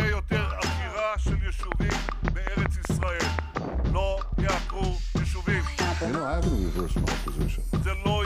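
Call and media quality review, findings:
Train of clicks, 1.72 to 3.58 s: around ten near-identical ticks at a regular 5.4 per second, peaking roughly 20 dB above the sound and audible in gaps. Likely external interference or a struggling interface injecting pulses. Unlike random crackle or dropouts: uniform shape, steady spacing, nothing missing.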